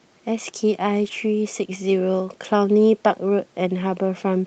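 From 1.03 to 1.13 s, a lost packet rebuilt from error correction leaves no gap, only briefly rougher, noisier sound from low-bitrate copies, unlike the buzzy fill of ordinary loss concealment.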